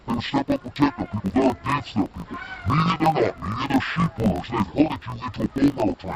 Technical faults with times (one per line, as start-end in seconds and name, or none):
0.00-6.15 interleaved audio read as planar